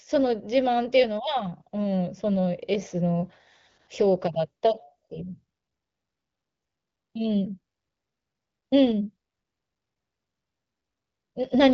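No technical faults occur in this speech; it carries the light band-limiting of the AMR wideband (HD Voice) codec, with nothing above about 7.3 kHz and a clarity that fits one of the codec's higher bitrates.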